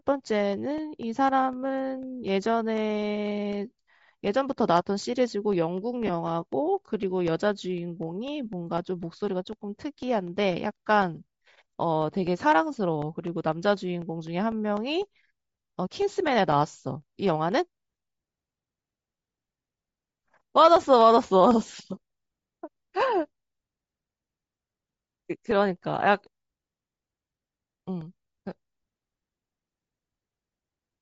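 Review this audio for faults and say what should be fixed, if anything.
Throughout the speech there is a breathy, grainy edge on the upper range. This is likely Bluetooth LC3 compression at a low rate, around 32 kbps, where the encoder zeroes much of the treble and fills it with noise. On a spectrogram the upper bands look speckled and patchy rather than smoothly textured. Sending the stream at a higher LC3 bitrate would keep that detail intact.

From 6.07 to 6.10 s there is a brief, roughly 20 ms noisy smear from lost LE Audio frames. That length fits two 10 ms frames that the decoder covered by repeating the last spectrum with random signs. A spectrogram shows a short smeared vertical band, and the waveform shows a small stretch of noise-like fill. Improving link stability and signal strength, or shortening the distance to the receiver, would prevent these dropouts.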